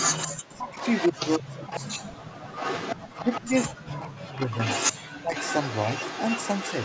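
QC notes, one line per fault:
0.00–0.42, 0.78–3.67, 4.07–4.96 and 5.35–6.85 s: echo leak. A delayed copy of the talker trails the direct sound, 174 ms behind through 3.67 s, then 138 ms behind from 4.07 s. At the very start it's about as loud as the speech itself, then it sits about 10 dB down, about 5 dB down around 4.1–5.0 s, and about 10 dB down again at the end. The likely cause is a far-end speakerphone whose echo canceller let the loudspeaker pickup through.
0.52–0.77, 1.11–2.47, 3.41–4.59 and 5.11–5.34 s: speech suppressed in double talk. The talker's level collapses while the other side is also active, dropping by something like 30 to 40 dB at its deepest, with the two middle stretches each losing around a second of sound in pieces. The likely cause is the echo canceller failing to tell local speech from loudspeaker echo and ducking everything together.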